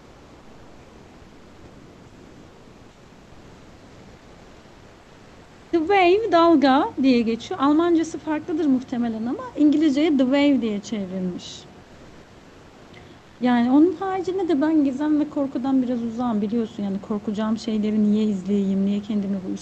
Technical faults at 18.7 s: none

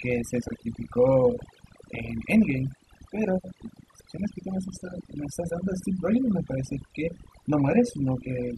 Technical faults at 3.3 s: overdone noise removal

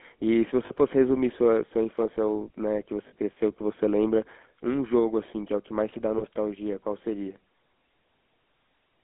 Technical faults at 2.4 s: GSM full-rate codec

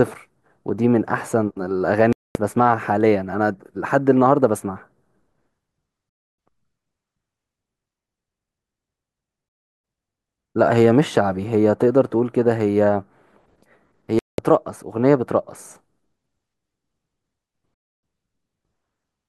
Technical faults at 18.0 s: digital broadcast dropout

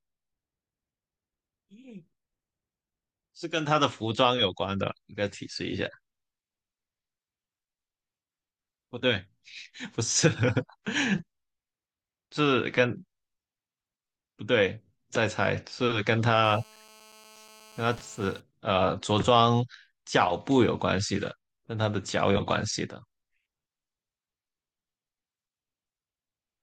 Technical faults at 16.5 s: GSM phone buzz

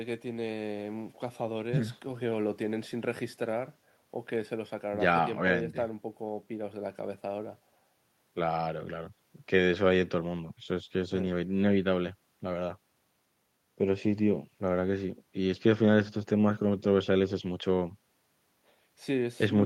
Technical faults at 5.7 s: none

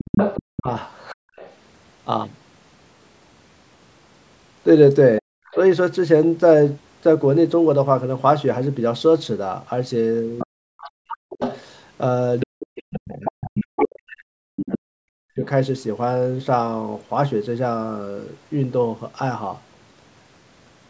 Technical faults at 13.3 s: other side's voice leaking through; speech suppressed in double talk

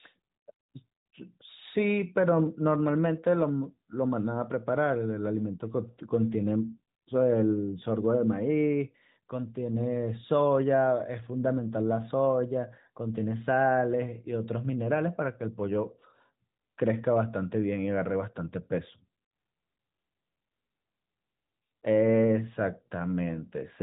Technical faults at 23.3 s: none

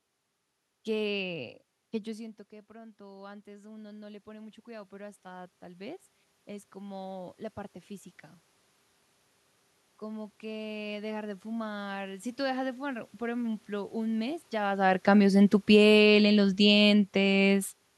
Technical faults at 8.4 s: none

